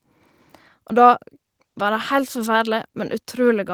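Speech with a call bitrate drop from 1.58 to 2.69 s: the sound turns rough and muffled for about a second, consistent with the encoder falling from roughly 32 to 17 kbps. Unlike packet loss, there are no gaps or robotic repeats, just coarser coding until it recovers.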